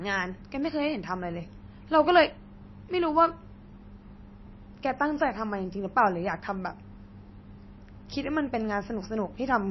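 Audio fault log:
Throughout: MP3 compression. Plainly audible watery, swirly speech with nothing above 5.8 kHz; likely a low-bitrate MP3, roughly 26 kbps, cutting treble and dropping weak detail.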